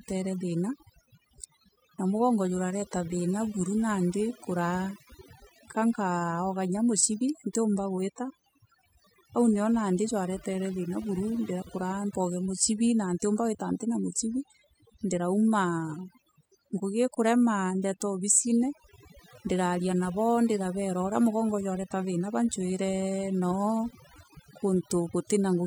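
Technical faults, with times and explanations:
Throughout, overdone noise removal: the noise reduction was pushed way too hard, so any frequency band sitting near its idea of the noise floor gets pulled right down or switched off. The background drops away and breaks up into little twinkling specks where bands flicker on and off, and the quieter parts of the voice get swallowed along with the noise.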